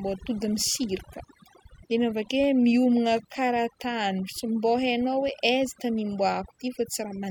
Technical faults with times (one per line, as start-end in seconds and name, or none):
0.00-7.30 overdone noise removal